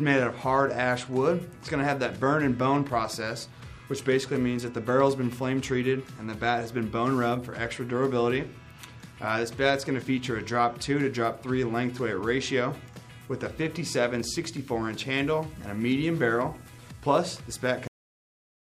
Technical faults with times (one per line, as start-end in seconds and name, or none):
17.87-18.66 cut-off end